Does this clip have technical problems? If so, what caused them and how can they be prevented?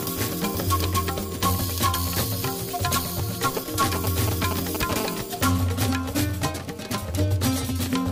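Yes. GSM signalling bursts: from 3.57 to 4.91 s, a nearby 2G phone exchanging brief control transmissions had its radio pulses rectified by the audio circuitry, producing a galloping dit-dit-dit of short 217 Hz buzzes roughly as loud as the wanted sound. Keeping phones well away from microphones, cables and preamps, or switching them off, prevents this.

GSM phone buzz: from 4.96 to 7.66 s, the phone was in a call, pulsing its transmitter about 217 times a second, and the circuit demodulated it into a steady, harsh, harmonic-rich 217 Hz buzz about 16 dB below the signal. Using shielded, properly grounded cabling and RF-filtered inputs prevents it.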